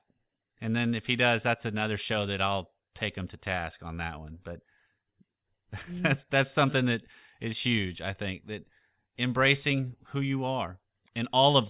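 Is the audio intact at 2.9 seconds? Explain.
Yes, the audio is intact at 2.9 seconds, with no dropout, click, distortion or other fault at that moment.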